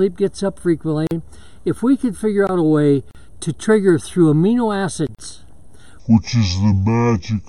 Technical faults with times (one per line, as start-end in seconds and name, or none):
1.07-1.11 gap at a join of encoded pieces
3.11-3.15 gap at a join of encoded pieces
5.15-5.19 gap at a join of encoded pieces
6.00-7.49 section at the wrong speed